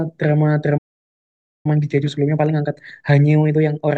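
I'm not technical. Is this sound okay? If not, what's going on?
No. At 0.77 s the speech suddenly cuts out and there's dead silence until 1.66 s, a gap of about 0.87 s. This is a playback stall: the player most likely ran short of incoming audio, or got held up by something else on the device, so it had nothing to send to the speakers and simply went quiet until the data arrived and it could pick up again.

From 1.66 s right through to the end, the speech sounds rushed, about 1.25 times normal speed, yet the pitch stays natural rather than turning squeaky. This is time-compressed catch-up: after the pause, the player was behind, so it trims out tiny slices of sound and smoothly blends the remaining pieces together to regain the lost time.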